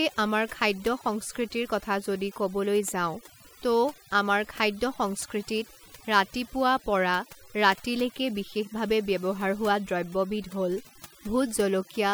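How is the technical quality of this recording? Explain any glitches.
The main problem is overdone noise removal across the whole speech clip. The noise reducer was pushed too hard, so it's muting individual frequency bands close to its noise estimate and dragging quieter parts of the voice down too. You get a lowered background that breaks up into twinkly specks.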